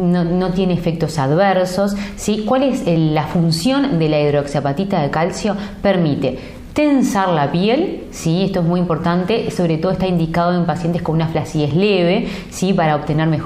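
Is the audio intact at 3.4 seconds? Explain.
Yes, the audio is intact at 3.4 seconds, with no audible fault at that moment.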